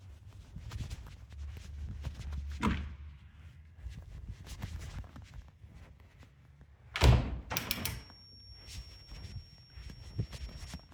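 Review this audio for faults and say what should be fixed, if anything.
A feedback whistle holds at 5.5 kHz from 7.60 s to 10.94 s, well below the sound. Likely cause: a loudspeaker-to-microphone loop at the brink of feedback. Prevent it by lowering monitor gain or separating speaker and microphone.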